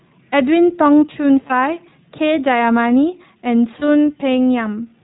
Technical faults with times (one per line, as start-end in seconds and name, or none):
0.00-5.04 iLBC codec
1.48-1.52 lost iLBC frames
3.80-3.83 lost iLBC frames